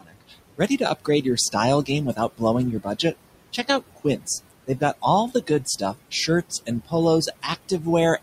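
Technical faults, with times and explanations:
throughout, noise suppressor artifacts: the room noise, about 15 dB under the speech, dips by about 21 dB between phrases and returns beneath them. On a spectrogram the background looks patchy and gated.
0.0–3.14 s, 3.53–4.28 s, 4.67–6.93 s, 7.27–7.86 s, speech cut by the noise suppressor: soft consonants and word endings, mistaken for noise, drop by up to about 21, 19, 18 and 15 dB and sound swallowed. Roughly 0.7, 0.2, 0.5 and 0.15 s of speech is affected in these spans. On a waveform the tails look clipped short, and on a spectrogram the faint edges of the speech are missing.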